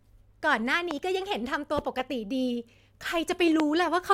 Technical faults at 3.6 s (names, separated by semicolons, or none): loud pop